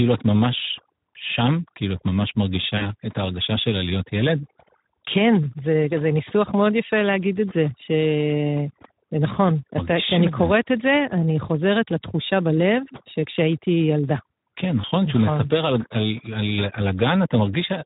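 Speech clip with overdone noise removal throughout: the background drops with twinkling specks; a spectrogram shows scattered isolated dots between words. Speex codec damage is plainly audible as hoarse, noisy speech, consistent with roughly 11 kbps, with noise-like fill above 8 kHz. VoIP packet loss concealed by the speech codec appears at 2.77–2.93 s, fitting two lost frames, and at 14.81–14.85 s, fitting one. The decoder stretched the last sound into a fading tone or coloured noise, visible as a decaying waveform envelope.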